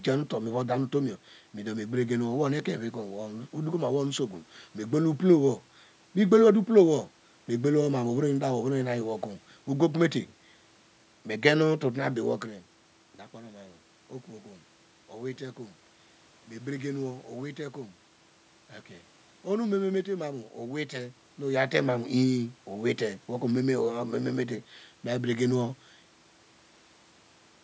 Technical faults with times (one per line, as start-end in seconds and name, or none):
none